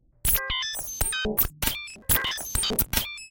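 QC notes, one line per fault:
1.88–2.93 s, processor overload crackle: a dense burst of gritty tearing rides on the sound for about a second, then stops cleanly. The processor could not finish its audio buffers on time, and a long run of deadlines, on the order of a couple of hundred, were missed back to back. Each missed block was simply skipped, leaving a hard-edged gap. At a spacing that fits buffers of roughly 5 ms, those gaps fuse into continuous crackle instead of separate clicks.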